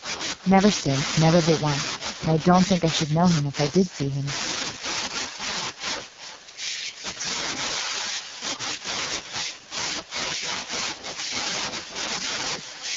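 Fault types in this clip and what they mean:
Echo with no canceller: The far end plays the call over a loudspeaker, and its microphone picks that playback up again, with no echo canceller removing it before it is sent back. Throughout the clip, every stretch of speech is followed, roughly 0.4 s later, by a second copy about 10 dB quieter. That returned copy sounds thinner than the original, so each phrase trails a faint shadow of itself.
AMR wideband (HD Voice) codec: The speech has passed through AMR-WB, which models the voice as a pulse-excited vocal tract up to 6.4 kHz and fills the band just above with shaped noise. Here the coding damage is heavy: the voice sounds rough and raspy throughout, which fits the codec's lowest 6.6 kbit/s mode. Nothing is present above 7.5 kHz, leaving the top end dull.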